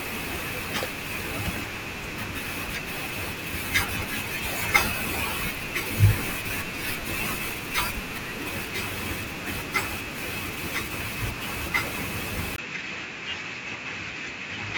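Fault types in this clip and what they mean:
Input switched to a poorer device: at 12.56 s, after a brief gap of about 20 ms, the speech turns duller and stays that way to the end, likely because the recording moved to a lower-grade microphone or headset. On a spectrogram everything above 7.6 kHz vanishes abruptly there, leaving a hard ceiling, and a faint new noise floor, roughly 55 dB down, appears. The waveform shows a short flat dropout but no change in overall level.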